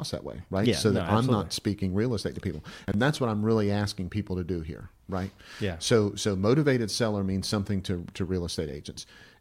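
Between 2.88 and 2.94 s, after "real estate to people" and before "that's what I'm really", the speech has chunks out of order: a 20 ms chunk plays two chunks late, so nothing is missing but the sequence is scrambled. It sounds like a brief jumbled stutter at the three abrupt joins.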